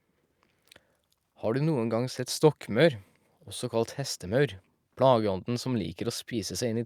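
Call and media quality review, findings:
Nothing stood out on listening to the speech in this clip, so there are no findings to log for this ticket.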